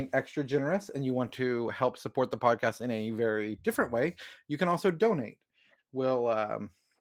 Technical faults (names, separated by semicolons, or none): none